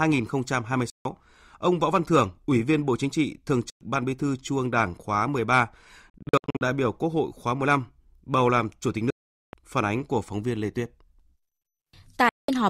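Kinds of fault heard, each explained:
Bluetooth dropout: The speech falls abruptly silent at 0.90, 3.70, 6.10, 9.10 and 12.29 s, for roughly 0.11 to 0.43 s each. It picks up later as if it had kept playing, most likely because wireless packets reached the headphones too late and were discarded. Near 6.1 s the loss is broken into short gaps of up to 64 ms spread over half a second. A waveform shows flat, hard-edged holes, and a spectrogram shows empty vertical columns.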